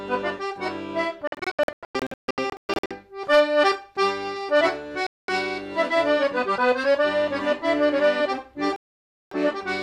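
Digital broadcast dropouts: the receiver lost valid frames and muted. From 1.27 to 2.91 s the sound breaks into scattered short holes, the longest 144 ms, about 0.98 s missing in total. It then cuts out from 5.07 to 5.29 s and again from 8.76 to 9.32 s.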